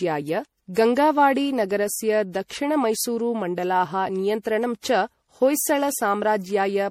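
Across the whole speech clip there is generation loss: the sound is swirly, smeared and hollow, with consonant attacks blurred into the surrounding sound. This likely comes from repeated MP3 encoding, the character pointing to something like 64 kbit/s passed through around seven times, each pass re-quantising on a shifted frame grid. A spectrogram would show mottled, hole-riddled high bands and nothing above 19 kHz, and the waveform's transients would look softened and pre-echoed.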